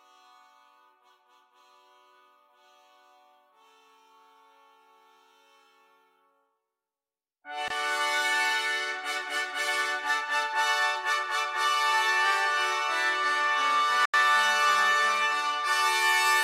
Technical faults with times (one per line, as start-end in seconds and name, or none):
7.68-7.70 Bluetooth stall
14.05-14.14 Bluetooth stall